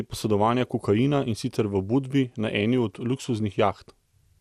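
From start to finish the speech sounds dull and gurgly, with a granular roughness and nothing above 15.1 kHz. This is likely MP2 compression at a rate that fits around 80 kbps, where too few bits starve the upper sub-bands and coarsen the rest.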